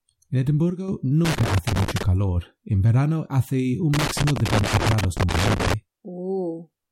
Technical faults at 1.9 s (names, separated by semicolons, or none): loose connector crackle